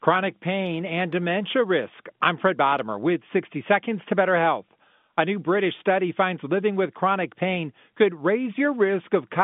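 No technical faults can be heard in this speech.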